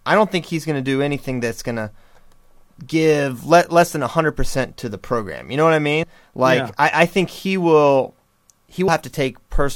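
At 6.03 s and 8.88 s, compressed frames are skipped: the speech jumps ahead roughly 70 ms, consistent with two missing 32 ms frames.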